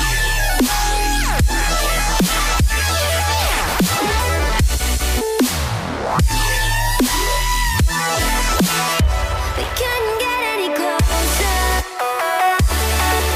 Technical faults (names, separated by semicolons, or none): none